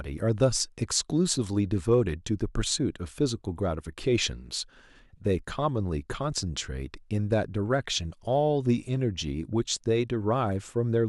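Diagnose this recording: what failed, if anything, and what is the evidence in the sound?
Nothing failed; no stage shows any audible fault here.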